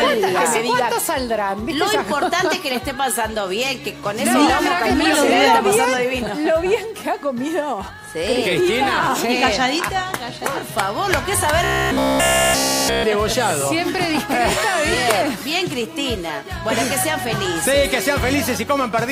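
From 11.64 to 13.04 s, fresh audio likely stopped arriving in time, and the playback side filled the gap by looping one short buffer over and over, with essentially nothing new getting through. This is robotic sound from repeated short buffers. The loop repeats about every 15 ms, stamping a fixed 66.8 Hz pitch onto the sound, so for that stretch it collapses into a rigid, metallic buzz that only loosely tracks what came before.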